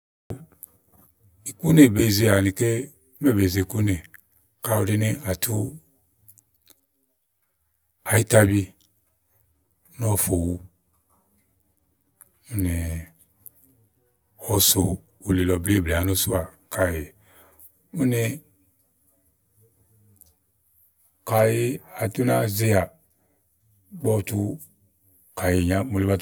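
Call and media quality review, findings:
Channel delay (comb filtering), whole clip: speech hollow and phasey. One channel lags the other by around 10 ms before the mono sum, so shared content cancels at evenly spaced notches starting near 50 Hz. Probable component: capture or downmix stage.

Cut-off start, 0.30 s: digital silence until 0.30 s, then speech enters mid-sound with no natural attack or fade. Recording or stream began late, truncating the opening. Probable component: capture start or stream join.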